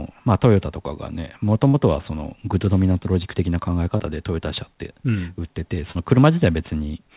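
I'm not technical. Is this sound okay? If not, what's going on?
No. At three points, pieces of the call didn't arrive in time.

The first is a burst of packet loss at 1.68 to 1.76 s. A run of about 60 ms of audio never reached the listener's end. To cover the hole, the receiver stretched out the last bit of speech it had and faded it down. You hear a short held buzz or hiss, and then the speech jumps ahead with that slice missing.

The other two are short concealed packet losses, at 3.98 to 4.02 s and 5.92 to 5.97 s. About 20 ms and 40 ms of speech went missing. The receiver patched each gap by continuing the sound just before it and then blending back into the real speech. Each one comes across as a quick smear or wobble, and a brief sound like a consonant may drop out entirely.

All of this travelled over a call line that carries nothing above 4 kHz, which gives it a telephone-like tone.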